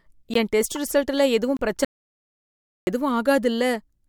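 A sharp tick lands at 0.34 s, just before "என் டெஸ்ட்": a block of digital silence about 17 ms long. The speech drops straight to silence and returns with no fade.

Right after "என் டெஸ்ட்", from 0.75 to 0.89 s, a squeaky, chirping burst of noise cuts across the speech. This is a corrupt frame decoded: damaged bits in the compressed stream were played anyway, so misread gains and codes threw energy into the wrong frequencies. The artefact lasts about 140 ms, roughly seven consecutive frames, rather than one brief blip.

A second block of digital silence, about 23 ms, arrives at 1.57 to 1.59 s, heard as a pop. Its length fits a 1024-sample buffer that the program failed to fill in time.

From 1.85 to 2.87 s the speech cuts out mid-flow into complete silence, with no room tone underneath, then resumes abruptly about one second later. This is an audio dropout to silence, and everything said during that second is lost. 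The likely cause is the input being lost, through a disconnected device, a failed link or a stray mute, while the recorder kept writing silence.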